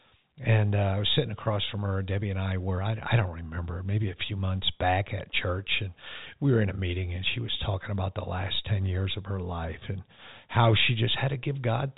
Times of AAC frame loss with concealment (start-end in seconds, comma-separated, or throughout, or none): none